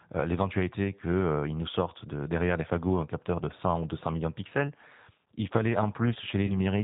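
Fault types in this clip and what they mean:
G.729 codec: Throughout, the speech sounds rough and synthetic, with nothing above 4 kHz and plainly audible coding damage. An 8 kbit/s codec causes this by rebuilding each 10 ms frame from a vocal tract filter, a pitch predictor and a few pulses.
VoIP packet loss concealed by the speech codec: From 6.46 to 6.53 s the sound smears into a fading buzzy tone or coloured noise and stays weak briefly afterwards. About 30 ms went missing, which fits one lost packet, and the decoder extrapolated its last pitch and filter at falling gain.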